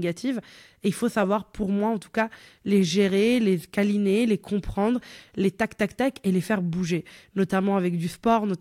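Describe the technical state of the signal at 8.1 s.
Nothing is wrong with the signal at 8.1 s; the audio there is intact, with no dropout, distortion or other fault to be heard.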